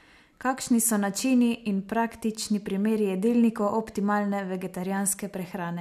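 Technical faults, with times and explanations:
No technical faults can be heard, so there are no times or explanations to give.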